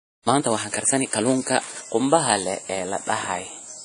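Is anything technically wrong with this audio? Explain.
Yes, two faults are audible in this speech clip.

Throughout, the audio shows damage consistent with WMA compression, likely from a low-bitrate encode around 32 kbps. Long transform blocks smear quantisation noise across tens of milliseconds, so speech rings and sounds washy, with hiss rising and falling with the signal. A spectrogram shows patchy, blotchy gaps where weak components were zeroed.

From 0.00 to 1.86 s there is a time-stretched section, likely sped up about 1.6 times by software that drops short pieces to keep the pitch. The speech sounds rushed at an unchanged pitch, then the pace abruptly slows at 1.86 s. The waveform shows compressed syllable spacing with small splice discontinuities.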